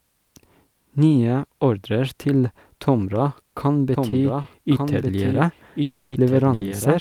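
From 3.94 s to the end, the speech has a doubled audio track: a second, full-band copy enters abruptly and runs about a second behind the original, somewhat quieter, at roughly 5 dB down. It has no decay or room colouring, which likely points to the audio being captured twice over a slower path.

At 4.09 s and again at 4.42 s there are short stalls from a late packet. Each time the jitter buffer ran dry, and the receiver held the last sound until the data arrived, for 30 ms and then 20 ms. Nothing is lost, but a sound lingers with a faint buzz or dip.

From 5.82 s to 6.15 s there is a call audio freeze, likely caused by packets held up in transit. The receiver extended the last sound for 300 ms as a fading buzz or hiss, then resumed where it stopped, inserting a gap without dropping any speech.

A third short stall from a late packet follows at 6.54 s to 6.70 s. The receiver stretched the held sound by 70 ms before the packet came in, giving an audible hitch with a slight buzz or dip.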